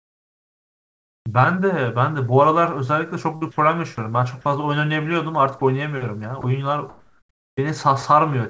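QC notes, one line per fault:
0.00–1.26 s, comfort noise in place of the background: the opening background is a steady, featureless hiss sitting about 49 dB below the loudest speech and about 17 dB quieter than the real background. This is likely discontinuous transmission, with the receiver synthesising noise while nothing is sent.
3.36–3.43 s, burst of packet loss: roughly 60 ms of audio never arrived. The receiver stretched the last sound for about 55 ms, fading it into a held, dwindling tail, then jumped ahead, so the speech resumes with a short piece missing.
3.51–3.57 s, 4.41–4.45 s, 5.59 s and 6.41 s, sound dropped by the voice detector: brief stretches of speech, 60 ms at the first and 20 ms at each of the others, give way to flat noise. This is likely the sender's detector mistaking quiet speech for background and pausing transmission.
6.89–7.57 s, comfort noise in place of the background: the pause is filled with the same smooth, detail-free noise, about 45 dB below the loudest speech and within about 1 dB of the real background's level. 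The texture changes even though the level barely moves, which likely points to synthesised fill during a transmission gap.
7.55 s, onset clipped by the voice detector: the next word bursts in abruptly, with about 20 ms of its soft start replaced by noise. This is likely the detector reacting late to the returning speech, so the opening of the word was never transmitted.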